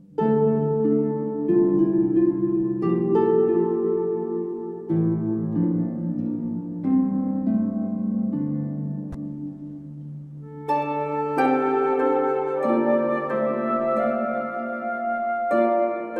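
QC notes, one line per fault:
No faults found. Nothing in the audio calls for a QC note.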